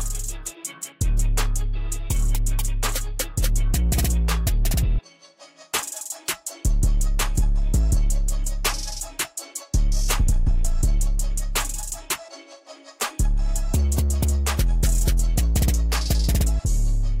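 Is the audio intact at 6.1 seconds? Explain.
Yes, the audio is intact at 6.1 seconds, with no fault at that moment.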